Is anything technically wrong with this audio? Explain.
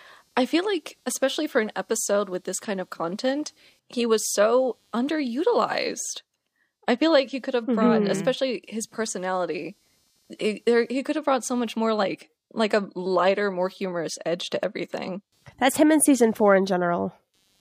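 Yes. Throughout the speech there is computer activity noise: processor or graphics load shifts the audio circuit's shared ground, adding a faint buzzing chirp that pulses at around 200 Hz, roughly 45 dB below the speech.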